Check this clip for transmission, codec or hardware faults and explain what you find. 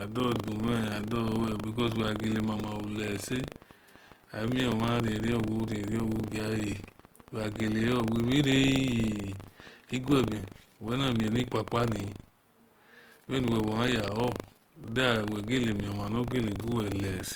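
Two faults run through the whole speech clip: a steady mechanical buzz from buffer tearing, and grainy coding damage that sounds like Opus compression.

Buffer tearing, throughout: a robotic rattle at 25 Hz rides on the speech and vanishes in pauses. Each 40 ms buffer period includes a small slice, under a tenth, of audio from about 100 ms earlier, spliced in with hard joins on both sides, so the repeated clicks fuse into a buzz.

Opus compression, throughout: the speech sounds rough, noisy and grainy, with a sandy texture but little swirling, and content still reaches about 20.2 kHz. The likely cause is Opus in its CELT music mode at a low bitrate, which fits roughly 24 kbps. The encoder keeps each band's energy but fills bands with folded or noise content.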